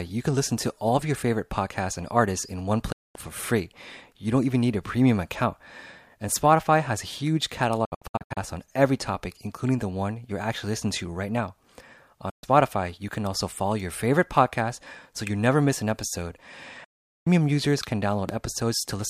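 Speech with four digital broadcast dropouts, where the receiver lost frames and muted after a quick fade of about 8 ms. On the waveform these are flat gaps, and on a spectrogram they are blank vertical bands: 2.92 to 3.16 s, 7.85 to 8.38 s (several short holes, none longer than 64 ms), 12.30 to 12.44 s just before "you can also follow", and 16.84 to 17.27 s between "never miss an episode" and "users can". The gap lengths fit 32 ms frames. A loud pop follows from 18.29 to 18.31 s, right after "users can". It appears as a single tall spike about 15 dB above the speech and a thin full-height stripe on the spectrogram, while the speech continues underneath. It was likely caused by a voltage step from a plug, switch or static.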